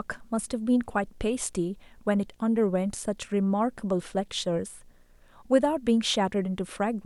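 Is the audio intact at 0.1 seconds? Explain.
No. At 0.1 seconds, and for the whole clip, a steady 60 Hz buzz with a gritty hash above it sits under the speech, about 40 dB below it: quiet. This is video or display buzz. A screen or its video cable is leaking interference into the audio path, and the buzz pulses at the picture's 60 Hz field rate, with the sharp edges of each field producing the hash.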